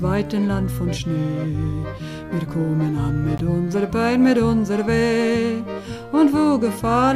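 At 3.38 s there is a block of digital silence lasting 16 ms, where the output buffer was likely not filled in time and its samples came out as zeros. The audio drops straight to nothing and returns with no fade, and the event is heard as a very short hole. On a waveform it shows as a flat line at zero; a spectrogram shows a thin blank vertical strip.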